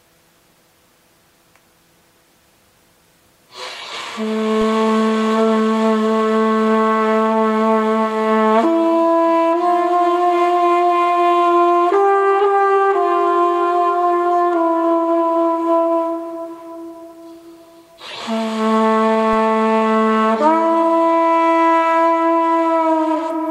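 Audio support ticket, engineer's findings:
DC step at 4.61 s and 19.33 s. The zero line jumps by about -20 dBFS, likely from a converter recalibrating or an offset input being switched in. Each step is heard as a low thump or click, then decays away through a 20 Hz high-pass.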